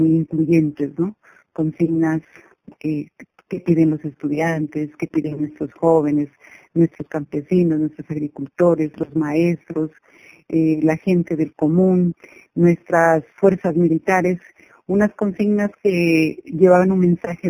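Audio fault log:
throughout, imaging from linear upsampling: straight-line interpolation, fitting an 8-to-48 kHz rate change, leaves faint mirror images at 4–8 kHz, about 35 dB down, a light metallic shimmer.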